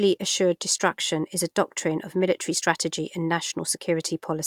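No technical faults are audible.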